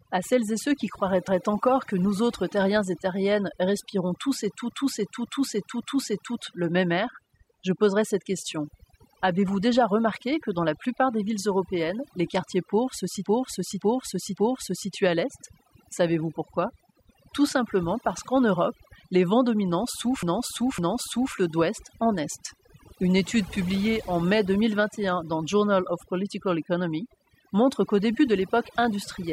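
From start to finish the speech carries overdone noise removal. The denoiser was pushed so hard that any frequency band near its noise estimate is cut deeply, taking quiet parts of the voice with it. The background drops to near silence flecked with twinkling specks. On a spectrogram the gaps between phrases look almost black with scattered isolated dots, and the voiced regions show ragged, holed harmonics.

At 4.72 s, after "terriennes respirons tous et", there are repeated frames. A block of about 0.56 s, which fits a run of six compressed frames, plays three extra times before "le même air je" follows at 6.39 s. The same thing happens at 13.26 s after "les quartiers pauvres se", with three extra plays running to 14.93 s before "à l'est". At 20.23 s, after "les vents dominants", the block plays twice more, ending at 21.34 s before "d'ouest en est". Each event is a stutter and adds about 1.7 s, 1.7 s and 1.1 s of time. 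The waveform shows identical copies of the block placed side by side.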